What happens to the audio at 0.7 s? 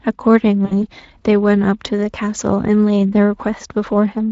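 Right around there, from about 0.65 to 0.74 s, you get VoIP packet loss concealed by the speech codec. Roughly 60 ms of audio went missing, which fits about three lost frames. The decoder covered the gap by stretching its last pitch and filter forward while pulling the gain down, so the speech smears into a short buzzy tone or coloured noise that fades, and then stays weak or distorted until it recovers. The Speex coding itself is light.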